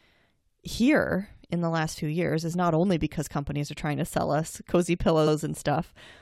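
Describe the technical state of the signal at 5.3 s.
Repeated frames at 5.26–5.33 s, just after "to sell us cozy": a 69.7 ms block, consistent with three compressed frames, plays twice, causing an audible stutter and lengthening the speech by 69.7 ms.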